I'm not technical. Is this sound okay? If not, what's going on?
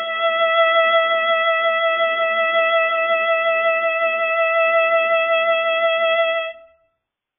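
No. AAC compression damage runs through the whole clip, from start to finish: the music sounds muffled and smeared, with nothing above about 3.5 kHz, and held sounds warble or fizz. The likely cause is saving at a very low quality setting. To shrink the file, the encoder discards the upper frequencies entirely and roughly approximates the rest, so brightness disappears and what remains wobbles instead of sounding steady.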